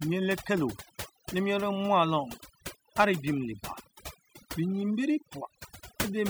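Throughout the recording the background drops to near silence dotted with twinkling specks. This is overdone noise removal: the noise reduction was set so strong that it switches off frequency bands near its noise estimate, taking quieter parts of the speech along with them.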